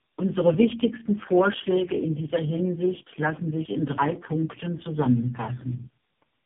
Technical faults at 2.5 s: tandem speech coding

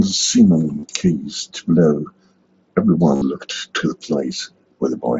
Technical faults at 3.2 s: concealed Bluetooth headset packet loss

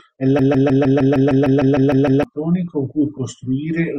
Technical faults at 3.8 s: none

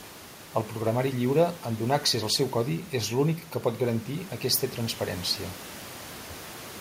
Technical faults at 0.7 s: none

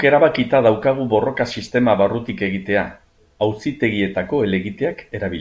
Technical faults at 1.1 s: none

